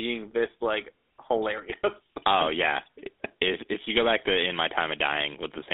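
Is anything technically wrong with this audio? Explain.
Yes. A GSM full-rate codec colours the speech from start to finish. This early mobile codec models the vocal tract as a filter and drives it with a regularly spaced pulse train, keeping only every third excitation sample, with a coarseness that fits a 13 kbps stream. The line band runs from roughly 250 Hz to 3.7 kHz, so the speech is thin and muffled. The sparse excitation adds a plainly audible buzzy, gravelly roughness to the voice.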